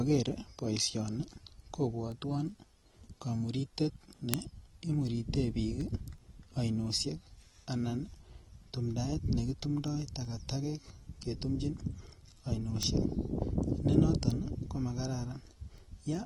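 AAC compression runs throughout the speech, which sounds dull and smeared with nothing above 11.8 kHz, likely from AAC-LC encoding at a low bitrate, around 32 kbps. Word clock ticks run from 0.27 s to 16.15 s, some forty sharp ticks of uneven strength about every 0.4 s. A receiving device on its own unlocked clock, drifting by roughly 50 ppm, drops or repeats a single sample each time the clocks slip.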